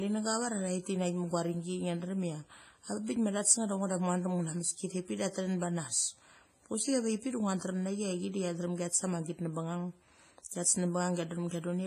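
WMA compression throughout: the speech rings and sounds washy, with hiss breathing along with it and nothing above 15.4 kHz, likely from heavy transform coding near 24 kbps.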